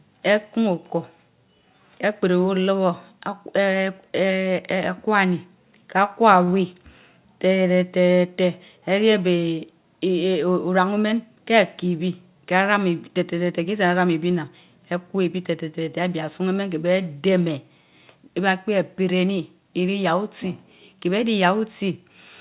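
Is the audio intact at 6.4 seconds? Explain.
No. At 6.44 to 6.49 s there is a short stall from a late packet: a packet missed its playout time, the jitter buffer ran dry, and the receiver stretched the last sound for about 34 ms until the data arrived, then resumed from the same place. Nothing is lost, but playback sits 34 ms later afterwards, and that speech sound is held slightly too long, with a faint buzz or dip, inside the call path's band that stops at 4 kHz.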